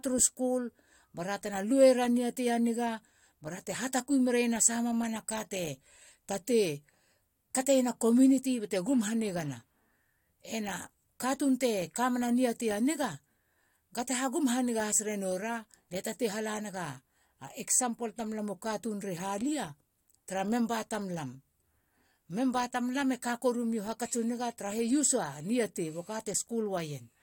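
No audible technical faults present.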